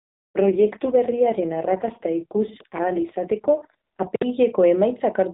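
Speech over an AMR narrowband mobile link, band-limited below 4 kHz, with an AMR rate drop from 0.38 s to 4.08 s. The bandwidth stays the same and there is no gap. The voice turns rougher, buzzier and more synthetic, which fits the codec falling from 12.2 to 4.75 kbps. A weak radio link makes the network do this, spending bits on error protection instead of speech detail. After 4.08 s the rate recovers and the roughness eases.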